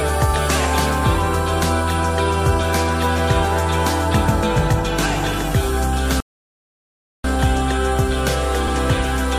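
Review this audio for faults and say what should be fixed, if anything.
The sound cuts out in mid-flow at 6.20 s and stays silent until 7.24 s, a gap of about 1.04 s, before carrying on. This is a playback stall, likely the player running out of buffered data or its thread being blocked. A larger playback buffer and keeping the audio thread free of blocking work would prevent it.

At 8.66 s a short stutter is heard: the stretch up to 8.73 s, about 70 ms, plays twice. These are repeated frames, a block fitting roughly three compressed frames written or sent again, lengthening the audio by 70 ms. Checking frame sequence numbers or timestamps during writing and transmission, and dropping duplicates, would prevent it.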